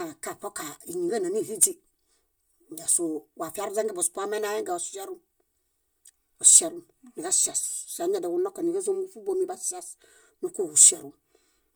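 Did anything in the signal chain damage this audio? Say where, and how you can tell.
Yes. Across the whole speech clip one channel arrives roughly 3 ms behind the other, and the two have been summed to mono, giving channel delay (comb filtering). The offset points to a buffer or routing stage ahead of the mono fold-down. The sound is hollow and phasey, with a first cancellation near 200 Hz and further nulls evenly spaced upward. On a spectrogram these show as fixed dark horizontal bands that stay put the whole time.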